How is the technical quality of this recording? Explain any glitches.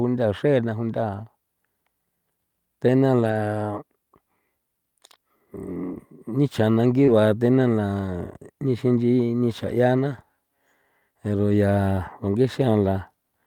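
The recording has two kinds of packet-loss artefact, spread between about 3 and 10 seconds into the clip.

Lost packets rebuilt from error correction occur at 3.19 to 3.33 s and briefly at 7.08, 8.94 and 9.98 s. Each missing packet was replayed from a low-bitrate copy carried in the next one, so nothing drops out, but those stretches turn grainier and noisier. The longer event, about 80 ms, fits four separate 20 ms packets.

A short concealed packet loss runs from 7.05 to 7.10 s. About 20 ms never arrived, and the decoder extended the preceding sound before blending back into real audio. It is heard as a brief smear or wobble, overlapping the 7.08 s rebuilt frame.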